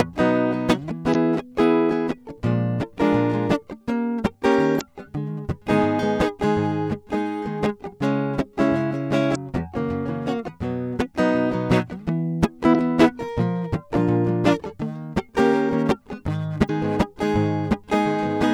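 Brief glitches cut through the music at 1.11–1.16, 4.77–4.81, 9.32–9.36, 12.71–12.75 and 16.66–16.70 s, each about 40 ms long. This is damaged data in a compressed stream: corrupted bytes make the decoder misread frames and lose sync until it finds the next header.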